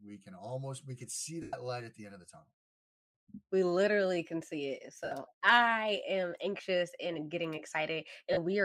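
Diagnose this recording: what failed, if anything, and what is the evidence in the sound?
The failure is in the wireless link, with the LC3 decoder concealing the gaps. These are lost LE Audio frames. The speech smears into a noisy, pitchless wash at 1.42–1.53 s (105 ms), 5.05–5.12 s (about 68 ms), 6.57 s (15 ms) and 8.33–8.37 s (about 38 ms). The lengths fit 7.5 ms frames. The decoder repeats the last spectrum with scrambled signs, so tone becomes noise. It fades that after a few frames, so the longest gap sags toward silence. The light codec coding underneath is not the cause.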